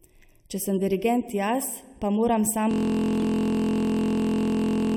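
Channel delay (comb filtering) runs throughout: one channel lags the other by roughly 0.4 ms, so the mono sum cancels at evenly spaced frequencies starting near 1.5 kHz, leaving the speech hollow and phasey.

A corrupt frame decoded at 1.60 to 1.64 s, just after "sem dirigent" and before "pa moram": damaged bits across a few compressed frames were played anyway, throwing energy to wrong frequencies as a brief burst peaking at about -15 dBFS.

A system hang loop takes over from 2.71 s, right after "pa moram", to the end: the hardware keeps replaying one 23.22 ms slice, which fits a 1024-sample buffer, producing a steady buzz at 43.1 Hz.

Another corrupt frame decoded at 3.23 s, inside that loop, adds a quieter blip of misplaced energy at about -25 dBFS.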